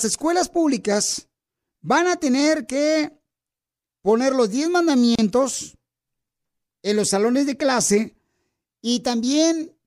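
At 5.15 s the speech just drops out for about 32 ms, a gap at a join of encoded pieces. Each piece went through the encoder separately, and its lead-in delay and end padding stayed in, so there's a slightly smeared hole before the speech picks right back up.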